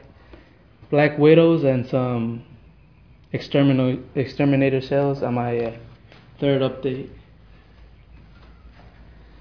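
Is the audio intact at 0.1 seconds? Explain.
Yes, the audio is intact at 0.1 seconds, with no fault present at that moment.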